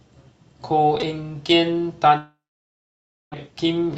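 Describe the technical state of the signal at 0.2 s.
At 0.2 s the speech is intact, with no dropout, click or other fault, just the ordinary band-limited character of the Opus call path it passed through.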